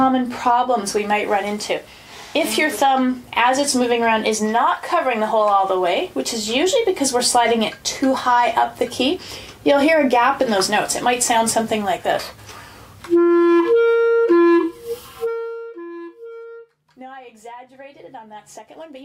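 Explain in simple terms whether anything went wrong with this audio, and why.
Nothing went wrong with this audio. Its volume behaves as it should, without being turned down or back up partway through.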